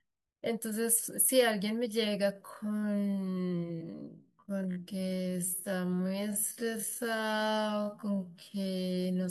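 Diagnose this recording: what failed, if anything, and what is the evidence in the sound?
Time-stretched section, 2.30 to 9.04 s: the speech abruptly slows to half pace while its pitch holds, so it drags. Editing or playback software likely lengthened this span to fit a duration, repeating short pieces rather than resampling.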